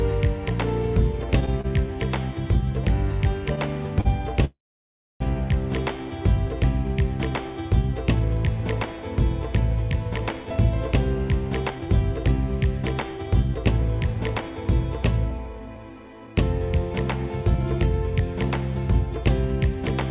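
Right at the start, between 1.40 and 1.66 s, there's a run of repeated stalls, a stutter. The jitter buffer kept running dry because packets turned up late, so the receiver filled three little gaps, the longest 30 ms and 60 ms in all, by carrying the last sound on. That's nearly a quarter of that stretch being patched, and you hear it as a choppy, dragging hitch rather than anything dropping out.

At about 4.01 s there's a short stall from a late packet. One packet simply wasn't there on time, the buffer emptied, and the receiver held the previous sound for 40 ms until it arrived, then carried on from the same spot. It comes across as one sound lingering a touch too long, with a slight buzz or dip, and it nudges the delay up by 40 ms.

Barely half a second later, from 4.45 to 5.22 s, you get a call audio freeze. The sound hangs for a moment, then goes quiet for most of it, around 640 ms of near-silence, before picking up exactly where it left off. 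That's most likely packets held up in transit, with the receiver stretching and fading the last sound across the 756 ms wait. It inserts a pause into the audio without skipping over anything.

Then from 10.43 s right through to 19.89 s there's a jitter buffer speed-up. The buffer was holding more than it wanted, so the receiver kept snipping out tiny pitch-period-sized slices to catch up, roughly half a second over the whole span. The result runs at about 106% speed with the pitch unchanged, so it feels slightly rushed and crowded. All of this sits on a call path with nothing above 4 kHz, which fits G.711 mu-law at 64 kbps.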